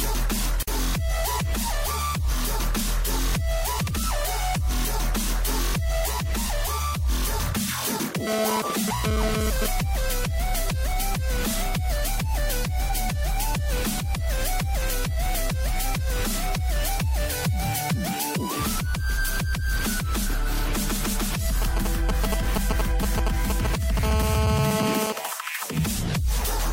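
At 0.63 s, pieces encoded separately were joined without trimming their encoder delay and padding, leaving a gap at the join of about 49 ms. The sound breaks off abruptly and resumes where it stopped. From 8.27 to 9.66 s, a nearby 2G phone transferring data had its radio bursts rectified by the audio circuit, producing GSM phone buzz. It is a harsh, harmonic-rich 217 Hz rasp at about 3 dB below the signal that comes and goes. From 21.62 to 23.99 s, the same kind of interference from brief signalling transmissions produces GSM signalling bursts, a galloping pattern of short 217 Hz buzzes a few decibels under the sound. From 24.03 to 25.13 s, the phone in a call causes steady GSM phone buzz again, about 3 dB below the signal.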